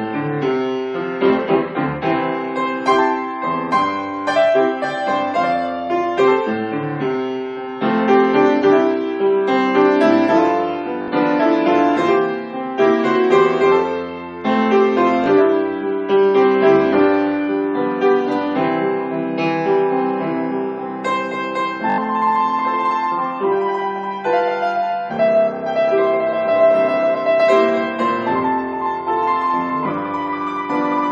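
At 11.02 s a repeated buffer fault produces a brief stutter lasting to 11.08 s, as the same short slice sounds three extra times with a hard join at each repeat. At 15.24 s a single extra repeat gives a click-like tick, and at 21.90 to 21.98 s four extra repeats make a short buzz. The repeats fit a 20 ms buffer replayed while fresh audio was late, losing about 70 ms at the longer events. Unlike a dropout, there is no silence. The gap is filled with copied sound.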